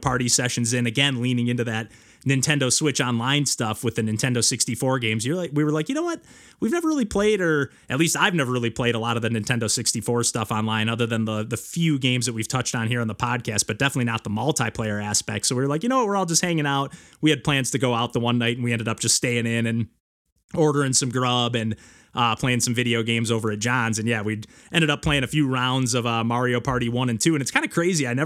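Nothing in the recording stands out as a technical fault; the speech runs along without any glitch, dropout or disturbance worth pointing to.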